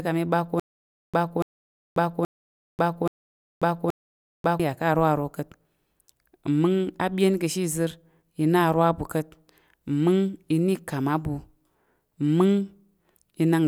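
A speech clip in which playback likely stalled between 0.60 and 4.60 s, retrying five times and replaying the last buffered fragment each time before running dry. The result is a stutter with silent gaps: the same 287 ms burst of speech repeats at a steady 827 ms period, each repeat followed by about 540 ms of dead digital silence. The audio that should have filled that stretch never arrives.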